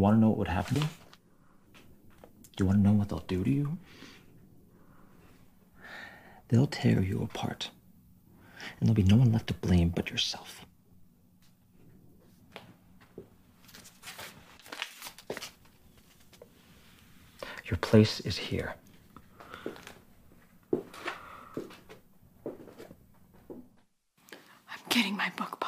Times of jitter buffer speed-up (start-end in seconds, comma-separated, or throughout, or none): none